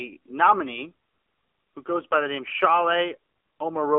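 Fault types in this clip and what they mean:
AMR narrowband mobile codec: The speech runs through the whole clip as a narrow mobile-phone band, roughly 300 Hz to 3.5 kHz, with nothing above 4 kHz. Plainly audible buzz and a synthetic, pulse-driven edge point to a low rate near 7.4 kbps in AMR-NB. That modelled, synthetic quality sets it apart from a plain telephone band-pass filter, which narrows the sound but leaves what remains natural.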